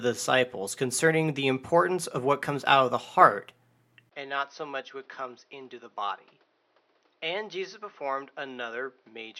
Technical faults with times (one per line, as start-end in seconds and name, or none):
4.09-9.40 input switched to a poorer device